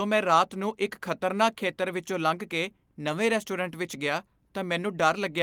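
Speech recording with no audible technical faults anywhere in the clip.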